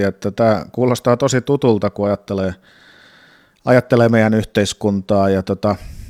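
Nothing here to flag, since the speech runs through without any technical fault turning up along the way.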